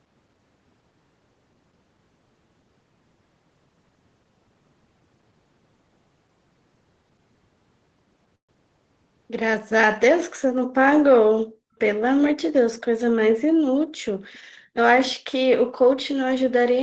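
At 8.35 s the speech stalls. The last sound is drawn out as a short buzz that dies away into about 120 ms of silence, and the audio resumes at 8.52 s exactly where it broke off. Roughly 130 ms has been inserted and nothing lost, so everything afterwards runs about 130 ms later. The likely cause is a call audio freeze: packets arrived late, the jitter buffer emptied, and the receiver padded the wait before playback continued.

From 11.47 to 11.73 s the room tone behind the speech suddenly falls away, by about 40 dB at its deepest, for around a fifth of a second, then returns. The same dip recurs from 13.81 to 14.01 s, again about 40 dB down, and from 14.40 to 14.74 s, about 36 dB down, lasting a few tenths of a second. This is background gated by the echo canceller: while the far end's sound played from the loudspeaker, the canceller clamped the microphone hard, taking the ambience with it until it released.

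Between 14.33 and 14.39 s, just before that last dip, a very faint ghost of the speech appears about 272 ms behind the original, roughly 35 dB below it and only a brief scrap. The likely cause is an echo leak: loudspeaker sound picked up by the microphone slipped past the echo canceller and was sent back down the 8 kHz-wide Opus call path.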